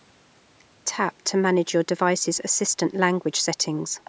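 From 2.36 to 2.53 s, a faint scrap of the speech comes back about 417 ms after the original, sitting roughly 30 dB below the main voice, short. This is an echo leak, likely from the far side playing the call over a loudspeaker, where its echo canceller let a trace of what its microphone picked up slip through and return down the line. The echo is band-limited like the rest of the call audio, which has nothing above 8 kHz.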